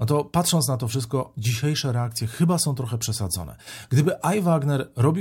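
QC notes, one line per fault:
No technical faults can be heard anywhere in the signal.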